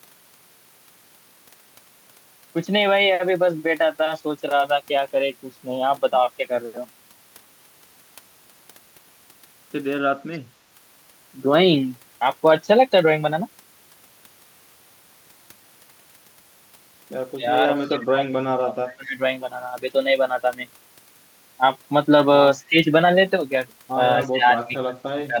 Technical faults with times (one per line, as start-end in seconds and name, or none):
10.32-10.39 echo leak
17.36-19.21 speech suppressed in double talk
17.85-17.89 echo leak
22.69-22.77 speech suppressed in double talk
24.30-25.40 speech suppressed in double talk
24.59-24.66 echo leak